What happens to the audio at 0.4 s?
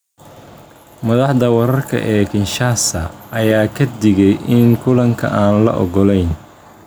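Gain pumping is present at 0.4 s and runs through the whole clip rather than starting there. The level swings by around 5 dB as the gain is pulled down on each loud sound. Loud and quiet passages sit close together in level and the speech sounds squashed. The likely cause is input gain set far too high, with a fast limiter or compressor clamping down on every peak.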